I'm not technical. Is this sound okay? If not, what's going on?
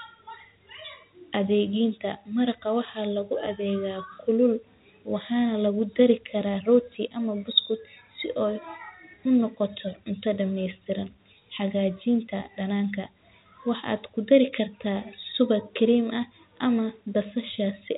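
Yes, there's nothing wrong with this speech recording. It has gone through ordinary landline telephone coding, called G.711, which keeps only sound below 4 kHz and gives it the narrower sound of a phone call.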